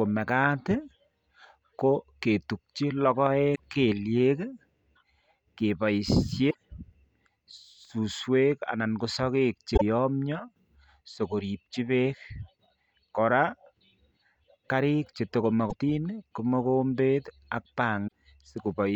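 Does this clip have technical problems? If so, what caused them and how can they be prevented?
Yes. Short glitches break the speech at 3.52–3.59, 6.47–6.55, 9.73–9.82 s (after "anan koo sokeek che"), 15.66–15.74 s (after "karik che tuko") and 18.04–18.09 s. This is damaged data in a compressed stream: corrupted bytes made the decoder misread frames and lose sync until it found the next frame header. Checksummed storage and reliable transport prevent it.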